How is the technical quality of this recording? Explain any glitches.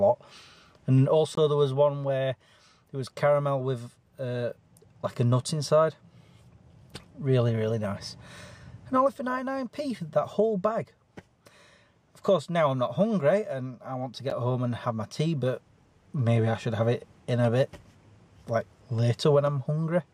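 Two brief dropouts, at 1.35 to 1.37 s and at 14.30 s, each silent for about 21 and 12 ms. These sound like a Bluetooth stall, likely from interference briefly draining the headphone buffer, then playback resuming where it stopped or slightly later.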